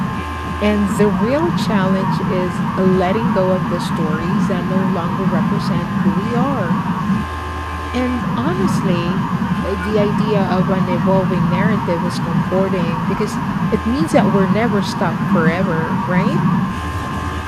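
No technical faults are audible anywhere in the speech recording.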